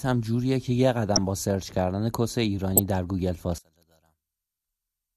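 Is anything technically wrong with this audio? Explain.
Yes, there are two kinds of fault.

Corrupt frame decoded, at 1.16 to 1.18 s and again at 2.77 to 2.86 s. Bits in the compressed stream were damaged, yet the decoder played those frames anyway, misreading gains and spectral codes so energy lands at the wrong frequencies. The first burst is brief and fits a couple of frames. The second runs longer, about five frames' worth. Each is a loud, harsh squeak-like blip cutting across the speech, peaking around -5 dBFS.

One channel inverted, from 3.58 s to the end. The level abruptly collapses by about 31 dB, and the speech becomes a faint remnant. The likely cause is one stereo channel flipped in polarity, so when the two channels are summed to mono, the centred voice shared by both cancels almost completely. Only the small differences between the channels survive, which is why so little of the voice remains audible.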